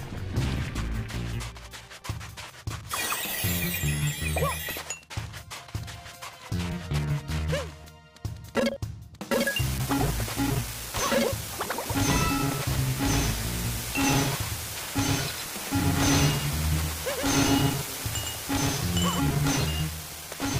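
From 11.86 s to 19.20 s a doubled audio track appears: a second full-band copy, about 5 dB quieter, trailing roughly 100 ms behind, likely from a slower duplicate capture path.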